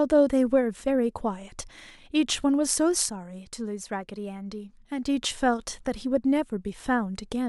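At 3.10 s the level drops abruptly by about 6 dB. This is a sudden gain jump. The speech and the background noise fall together in a single step, with no fade. The change is likely a digital gain setting applied from one sample to the next, without a ramp. The quieter stretch holds until 5.06 s. There the level steps back up just as sharply, and both speech and noise return at once.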